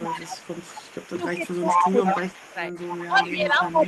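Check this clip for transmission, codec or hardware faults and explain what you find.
Two faults are present, both rooted in echo-cancellation trouble on the call; the Opus call path itself sounds as expected, with a top end near 12 kHz that fits a super-wideband setting around 24 kbps.

Echo leak runs through the whole clip: a delayed copy of the speech trails the original by about 187 ms, only around 5 dB below it. The likely cause is a far-end loudspeaker echo that the canceller failed to remove and sent back down the line.

Speech suppressed in double talk appears three times: 0.0 to 0.45 s, 1.13 to 2.61 s, and 3.08 s to the end. The speech level dips in patches, by roughly 15, 20 and 10 dB respectively, likely as the canceller, unable to separate talker from echo, attenuates both.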